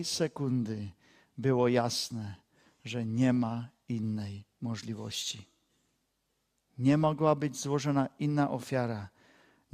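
A speech clip with a burst of DAB burbling from 3.34 to 3.48 s, after "było jasne że nie" and before "innej możliwości". For about 140 ms short blips of noise break out in single sub-bands. The span fits roughly six MP2 frames, where uncorrected bit errors at a rate of around 0.2 percent corrupt samples and scale factors. On a spectrogram, isolated sub-band strips flash brighter or drop out frame by frame, and the waveform shows jagged level jumps.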